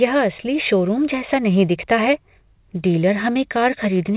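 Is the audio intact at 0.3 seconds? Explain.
Yes, the speech at 0.3 seconds is intact, carried through the call path with its telephone-band sound and nothing above 4 kHz.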